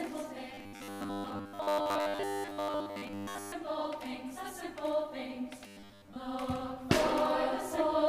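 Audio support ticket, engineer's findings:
Robotic sound from repeated short buffers, 0.54 to 3.52 s and again 5.67 to 6.16 s. Rigid metallic buzz at 100 Hz, so about 10 ms chunks looping while most of the real audio gets skipped. Likely upstream starvation, playback filling the gaps.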